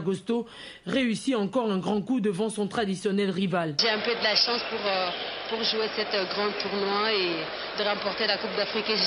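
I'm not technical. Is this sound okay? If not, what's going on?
Yes, this sound is okay, and nothing is going wrong with it.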